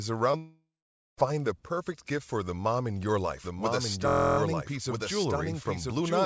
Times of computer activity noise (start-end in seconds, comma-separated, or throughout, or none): none